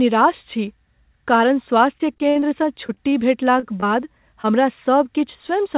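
From 1.98 to 3.14 s, packets kept failing to arrive in time, giving repeated packet loss (robotic sound). Ten separate gaps open in that stretch, the longest 58 ms. The receiver patched each by extending the preceding sound, about 206 ms of invented audio in all, roughly a fifth of the span, while about 120 ms of the real signal is gone. The speech turns choppy and mechanical, with pieces clipped out of it.

At 3.60 to 3.64 s there is a short stall from a late packet. One packet arrived about 27 ms behind schedule, so the jitter buffer emptied and the receiver held the last sound for those 27 ms until it caught up, then resumed where it stopped. Nothing is lost, but one sound lingers slightly too long with a faint buzzy sustain.

Two short concealed packet losses follow, at 3.80 to 3.84 s and 4.42 to 4.46 s. Each time about 20 ms of audio never reached the decoder, and the receiver bridged the hole with synthesized continuation, 19 ms and 14 ms respectively, before blending back. 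They register as brief smears or wobbles, and a short consonant may drop out. Throughout, nothing sits above 4 kHz, which fits a narrowband G.711 mu-law call path at 64 kbps.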